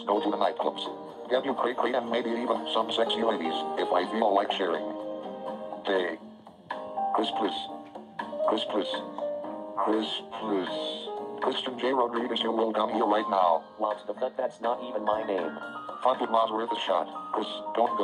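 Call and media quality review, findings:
Nothing stood out on listening to this recording.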